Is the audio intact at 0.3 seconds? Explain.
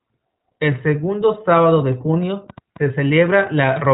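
No, iLBC codec coding runs through the whole speech clip, including 0.3 s. Each short frame, which fits 20 ms frames at about 15.2 kbps, is coded independently, so the speech sounds plainly rough and synthetic, with nothing above 3.8 kHz.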